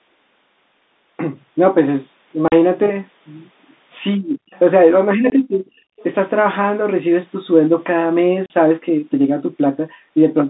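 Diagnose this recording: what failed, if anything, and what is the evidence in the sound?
Three short, hard-edged holes cut the speech: 2.48 to 2.52 s (40 ms), 5.30 to 5.32 s (20 ms) and 8.46 to 8.50 s (40 ms). This is packet loss filled with silence at the network stage. The gap lengths are whole multiples of 20 ms, which fits 20 ms packets, with one or two lost each time. The receiver put nothing in their place, so the waveform drops abruptly to silence and comes back just as abruptly.

The talker's level collapses twice. From 4.16 to 4.51 s it dips by up to about 40 dB, over roughly 400 ms. From 5.15 to 5.73 s it dips by up to about 25 dB, over roughly half a second. This is speech suppressed in double talk in the call processing, likely because the far side was talking at the same moment. The echo canceller could not tell the near talker from the loudspeaker echo, so it attenuated both.

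Right after those dips, brief scraps of a second voice surface at 4.54 to 4.59 s and 5.99 to 6.03 s, about 30 dB below the main speech. This is the other side's voice leaking through, also in the call processing. The far end was likely playing on the talker's loudspeaker, and the echo canceller did not remove all of it, so short residues of that loudspeaker sound slipped into the microphone path.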